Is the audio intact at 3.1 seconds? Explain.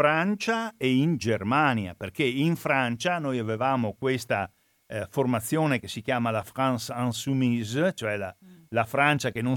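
No. At 3.07 s, between "perché in" and "noi avevamo questa eh", the stream likely suffered dropped samples: a fraction of a millisecond went missing, so the waveform jumps abruptly to a later value. Nothing audible is lost, but the jump produces one sharp click.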